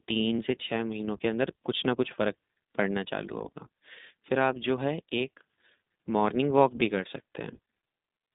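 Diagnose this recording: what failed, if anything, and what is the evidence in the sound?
The failure is at the codec stage: an iLBC codec affects the whole speech recording. The band runs from about 200 Hz to 3.7 kHz, and nothing passes above 3.8 kHz. The speech has a plainly audible rough, synthetic grain, which fits 15.2 kbps iLBC with 20 ms frames, each coded independently. An analogue telephone line or a simple low-pass filter would only muffle the sound. The grainy texture shows a low-bitrate speech coder.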